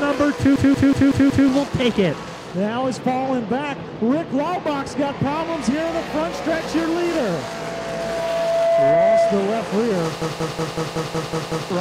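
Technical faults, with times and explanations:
0.56–1.49 s: system hang loop. Playback locks onto a 185.76 ms slice that repeats five times at 5.38 Hz, a machine-gun stutter. The host stalled while the hardware kept replaying one ring buffer, which fits an 8192-sample buffer; around a second of audio is lost.
7.02–9.67 s: loudspeaker feedback squeal. A single 670 Hz tone swells over roughly two seconds until it sits about 5 dB above the programme. The microphone is picking up its own loudspeaker, and at that frequency the loop gain exceeds one, so the tone feeds itself.
10.22–11.70 s: system hang loop. The same 185.76 ms stutter returns, now eight repeats at 5.38 Hz, again pointing to an 8192-sample ring buffer cycling while the system is frozen. Roughly one and a half seconds of audio are missing.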